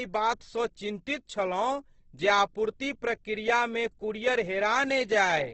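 Throughout the speech the sound is rough and grainy, with nothing above 8.2 kHz, pointing to heavy Opus compression at a very low bitrate, likely in its music mode. Bands starved of bits are filled with folded or noise-like content, so tonal detail turns hissy and coarse instead of dropping out.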